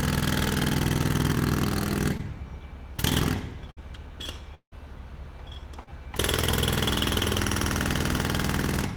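At 2.17 to 2.21 s, a short concealed packet loss drops about 20 ms of audio before it reaches the decoder. The receiver bridges 15 ms by extending the preceding sound, so the sound shows a brief smear or wobble rather than a clean continuation.

At 3.71 to 3.79 s, a burst of packet loss removes about 60 ms in a row. The receiver continues the last sound for 57 ms and fades it as the gap goes on, giving a short held buzz or hiss before the audio resumes with that stretch missing.

From 4.55 to 4.74 s, the audio breaks off for about 180 ms, most likely from a long network dropout. About 170 ms is filled by a fading continuation of the last sound, and 100 ms of silence is heard before the audio returns further along.

At 5.84 to 5.90 s, a second short concealed packet loss loses about 40 ms. The receiver covers 33 ms with extended sound and stretches the timing by about 10 ms, so the event comes through as a brief smear or wobble.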